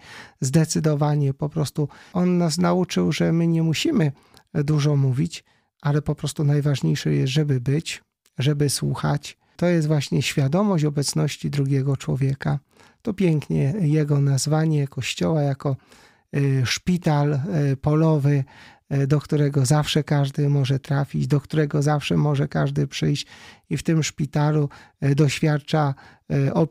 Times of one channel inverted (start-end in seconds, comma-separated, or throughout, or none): none